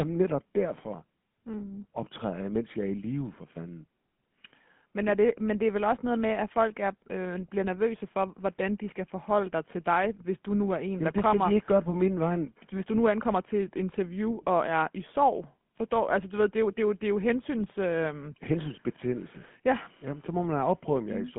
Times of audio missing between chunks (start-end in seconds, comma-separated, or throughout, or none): none